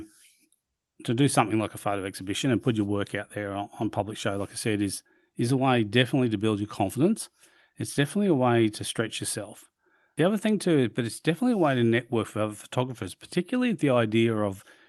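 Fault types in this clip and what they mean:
Nothing in this speech recording stood out as a problem on listening, with the call path's coding heard as its ordinary limited top end.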